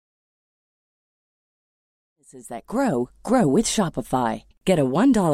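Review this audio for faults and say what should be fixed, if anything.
No faults; nothing to fix.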